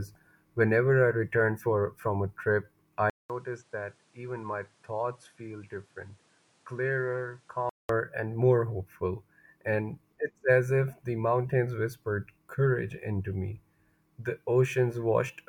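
At 3.10 s, just after "for from a trip", a silence of 200 ms opens. The speech then returns duller and quieter, down by around 10 dB. Nothing remains above 11.4 kHz. A new, faint background noise sits well beneath it. This points to the input switched to a poorer device, likely a different microphone or headset with a narrower band and its own noise. At 7.89 s, before "and more hopeful", the fuller sound returns.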